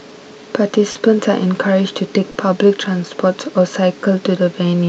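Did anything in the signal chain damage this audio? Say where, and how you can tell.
Yes: short concealed packet loss on the network, at 0.91 and 2.31 s. Each 40 ms gap was filled by extrapolation, showing as smeared, flattened spectrogram harmonics before the real signal resumes.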